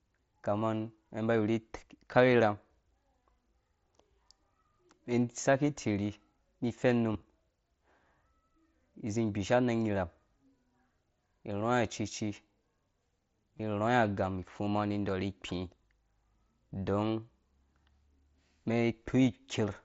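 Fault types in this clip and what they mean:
concealed Bluetooth headset packet loss: short buzzy blips that are mostly hidden in the speech, worst near 7.1 s, where 45 ms of gaps scattered over 90 ms leave a brief held tone. Lost headset packets were filled by repeating the best-matching recent waveform.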